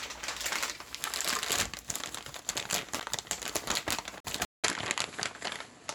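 A short recording of sounds with two kinds of trouble. There are two blocks of digital silence: a roughly 10 ms dropout at 3.00 s that comes across as a tick, and a longer 43 ms hole from 4.20 to 4.25 s, which fits a 2048-sample buffer not being filled in time. Both cut out and back with no fade. Then at 4.45 s there's a silence of about 190 ms, after which the sound runs to the end duller, with nothing above 11.4 kHz, a level shift of around 5 dB and a new noise floor sitting roughly 35 dB under the signal. That's most likely the input switched to a poorer device mid-recording.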